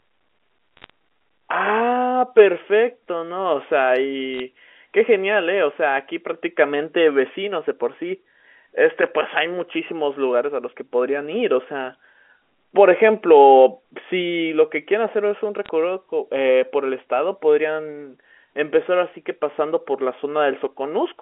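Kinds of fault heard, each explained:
Bit errors on a digital phone line: Flipped bits corrupt single samples, giving short bursts of sharp ticks and crackle over the speech near 0.77, 4.34 and 15.65 seconds.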